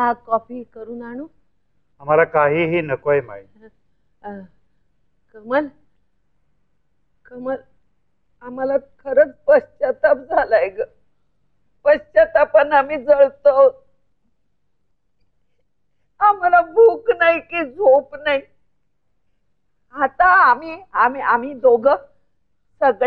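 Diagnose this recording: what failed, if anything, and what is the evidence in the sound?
Nothing failed: no stage from the analogue wiring and converter through buffering, processing, transport, storage and playback leaves any audible evidence in the sound.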